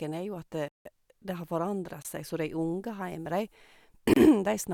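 Blocks of digital silence at 0.68–0.85 s (about 171 ms, fitting an 8192-sample block), 2.02–2.05 s (25 ms) and 4.14–4.16 s (29 ms): samples are replaced by zeros with no fade. The first is an audible hole in the speech, the others shorter holes.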